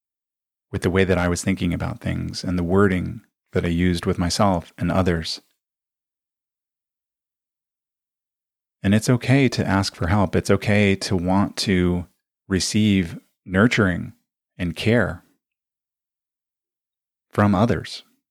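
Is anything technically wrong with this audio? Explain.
No, nothing in the signal stands out as a technical problem on listening.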